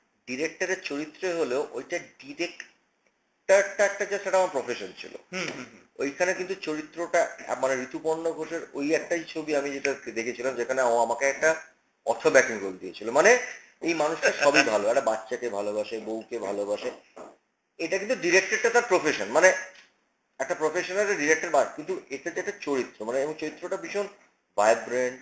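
The audio carries a buzz at 100 Hz throughout, present only while there is signal: a resampler restarted on every block. Each 10 ms block was converted in isolation, consistent with 48 kHz to 16 kHz, so every block edge carries a small error.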